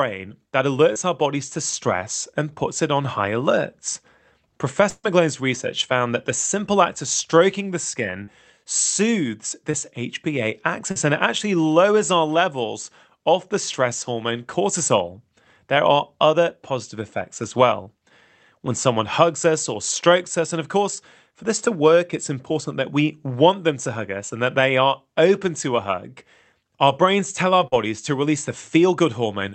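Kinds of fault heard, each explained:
Short concealed packet loss: Six times (0.93, 8.24, 9.71, 10.91, 17.83 and 27.68 s), 20 to 40 ms of the call arrived too late, and the receiver covered each hole by extending the preceding sound before blending back. Each one is a brief smear or wobble. On a spectrogram, the harmonics or noise texture hold unnaturally steady for a few tens of milliseconds, and the waveform shows a repeated cycle where the real detail should be.
Burst of packet loss: Near 4.89 to 5.06 s, about 140 ms went missing in a row. The decoder stretched the last sound and let it decay, so it becomes a fading buzz or hiss, with roughly 40 ms of near silence before the sound resumes further along. On the spectrogram, the Opus band stops at 8 kHz. There, a smoothed, dimming patch gives way to a dark gap, and the waveform tapers into flatness before abruptly restarting.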